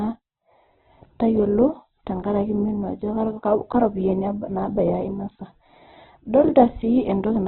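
Throughout, the speech cuts off near 4.2 kHz and turns rough and grainy rather than MP3-style swirly, likely heavy Opus compression at a very low bitrate.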